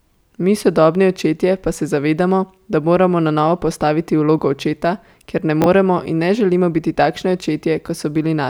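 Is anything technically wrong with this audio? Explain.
Yes. Chunks out of order at 5.62–5.66 s, after "vlogo očeta ker ne": one 20 ms chunk plays a chunk late, making a jumbled stutter with three hard joins.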